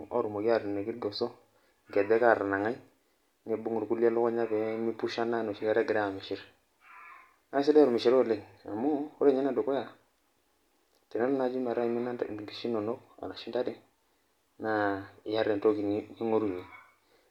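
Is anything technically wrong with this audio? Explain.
No, nothing in this speech recording stood out as technically wrong on listening.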